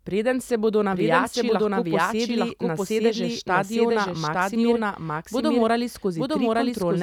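A speech recording runs the whole way through with a second, identical copy of itself trailing about a second behind, at roughly the same loudness as the original. The effect is two overlapping versions of the same talk rather than an echo: the late copy is full-band, with no fading tail or room character. This is a doubled audio track, likely from the same signal being captured twice, once through a slower path, or from an edit that left two out-of-step copies in the mix.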